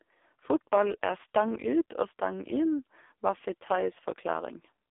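From start to end, the speech carries AMR narrowband mobile codec damage. Nothing passes above 3.6 kHz, and little below 300 Hz. The coder rebuilds the voice from sparse pulses. Heavy buzz and a synthetic, metallic edge suggest a very low mode, around 5 kbps.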